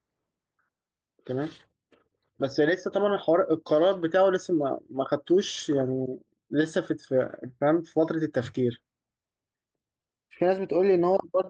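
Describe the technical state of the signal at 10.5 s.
At 10.5 s the signal is intact, with no dropout, glitch or distortion at that moment.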